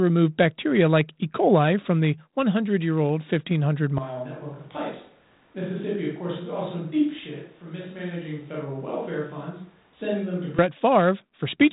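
At 3.98 s the speech abruptly turns roomy and hollow, thinner in the bass, roughly 10 dB quieter, with room noise now audible beneath it. This is likely a switch to a distant microphone. The close sound snaps back at 10.59 s.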